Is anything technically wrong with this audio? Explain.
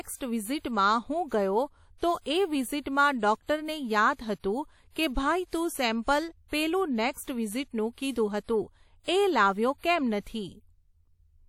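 Yes. Throughout the speech there is plainly audible transform-codec damage, most likely from WMA compression at a low bitrate, which fits roughly 48 kbps. The encoder works in long blocks, so quantisation noise is smeared over tens of milliseconds around each sound, and weak spectral lines are discarded. The result is a ringing, washy quality with a hiss that rises and falls with the signal, and nothing is present above about 18.7 kHz.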